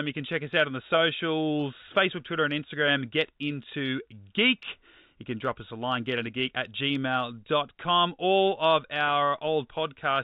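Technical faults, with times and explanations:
Nothing stood out on listening to this speech clip, which carries the narrow, telephone-band sound of G.711 coding.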